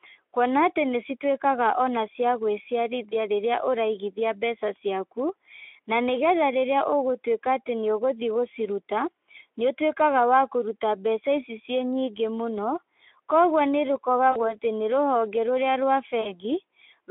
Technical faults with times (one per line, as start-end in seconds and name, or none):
3.10-3.14 VoIP packet loss concealed by the speech codec
14.31-14.55 VoIP packet loss concealed by the speech codec
16.21-16.36 VoIP packet loss concealed by the speech codec